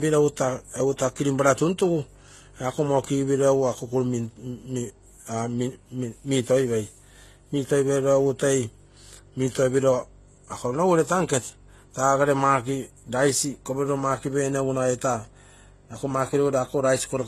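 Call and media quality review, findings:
Transcoding between lossy codecs, throughout the speech: likely a low-rate HE-AAC encode re-encoded as MP3, with a sound consistent with roughly 16 then 55 kbit/s. The MP3 stage spends bits re-coding the first codec's artefacts and adds its own, so both are heard together. Nothing above 12.3 kHz.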